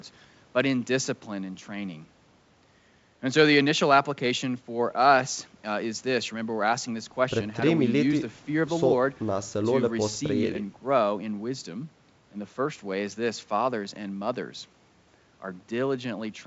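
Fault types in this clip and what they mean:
No faults can be heard in this speech recording.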